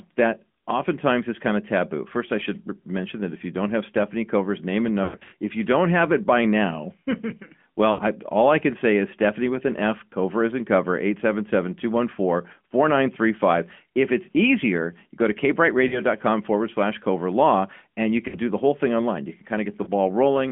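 Right from the start the speech has that AMR narrowband mobile codec sound: everything sits inside roughly 200 Hz to 3.4 kHz, with a plainly buzzy, synthetic edge that fits one of the middle AMR-NB rates, somewhere around 10 kbps, squeezing the voice into a vocal-tract model.

Then come the lost AMR speech frames. At 5.04 to 5.34 s, between "name and" and "if you don't have", about 180 ms drops out in patches, with the longest gap about 100 ms. There the decoder stretches the last good sound and lets it fade. There are shorter dips at 7.92 s before "I all I can", and at 15.88 s, 18.28 s (between "cover law and you" and "do the whole thing") and 19.84 s. Each is a brief warble or sag.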